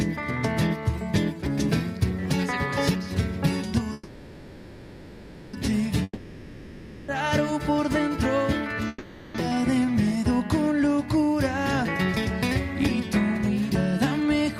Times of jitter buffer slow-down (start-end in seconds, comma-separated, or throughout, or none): 9.49-9.92